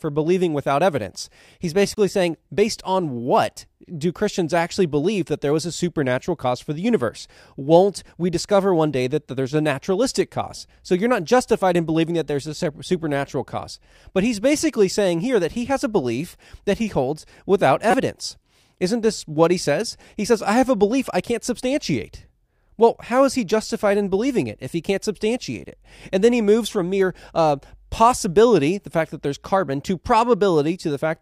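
A decoder playing corrupt frames as if they were valid, so misread gains and codes put energy at the wrong frequencies in short bursts of this speech. At 1.94 to 1.97 s a couple of damaged frames give a faint glitch, down at about -35 dBFS. At 17.91 to 17.94 s what sounds like a single frame bursts out loudly, at about -5 dBFS. At 23.50 s a brief glitch reaches about -15 dBFS.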